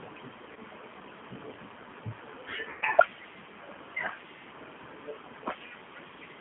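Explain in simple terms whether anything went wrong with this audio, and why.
Yes, two things went wrong. Throughout, the speech has the G.729 codec sound of a phone call. Only roughly 150 Hz to 3.4 kHz gets through, and the voice is rebuilt from a simple model, so it sounds plainly rough and a little synthetic rather than just muffled.

There is also VoIP packet loss concealed by the speech codec at 0.53 to 0.57 s and again at 2.70 to 2.85 s. Pieces of the stream went missing. The decoder filled each gap by stretching the last bit of voice into a buzzy tone or coloured noise that fades. It isn't a clean silent dropout, and the voice stays weak for a moment afterwards. The longer second gap, about 0.12 s, fits several lost packets.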